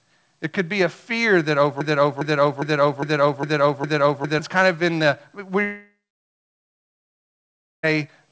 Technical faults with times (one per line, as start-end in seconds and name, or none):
1.81-4.39 broken-record loop
5.64-7.85 long network dropout